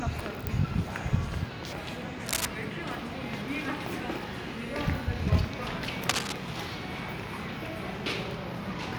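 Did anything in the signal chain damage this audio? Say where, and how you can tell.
Yes. Cable scratch noise appears at 2.26 to 2.45 s and again at 6.09 to 6.33 s, each burst lasting about a fifth of a second and roughly as loud as the sound itself. The stage is the analogue wiring. The likely cause is a worn cable, connector or control being moved, so its contact resistance jumps erratically and injects ragged noise. A spectrogram would show dense, patchy broadband smears at those times, and the waveform would show irregular spiky clusters.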